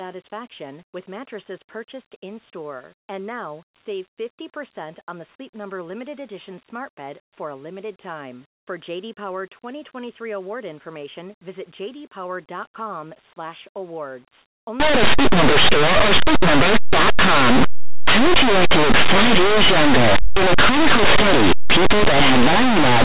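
From 14.8 s to the end, the sound turns into very loud, harsh distortion. This is linear audio read as companded: plain linear 8-bit samples are expanded as mu-law codes, so values just on one side of zero become the loudest outputs.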